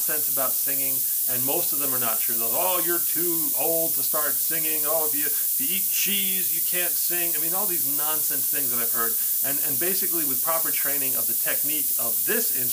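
From the first moment to the end, the whole clip carries low bit depth with noise shaping. The sound sounds like it's been squeezed down to about 3 bits, and the rounding error has been fed back so the noise gets shoved up toward the top of the band. What you hear is a constant, thin, bright hiss that gets much stronger toward the highs, sitting only around 15 dB under the sound itself.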